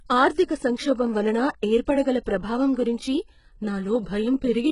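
A speech recording with HE-AAC compression damage running through the whole clip. Nothing is present above 11 kHz. The treble is rebuilt rather than recorded, so s sounds turn gritty and metallic. The damage is heavy, likely from HE-AAC coding at a very low bitrate, around 12 kbps.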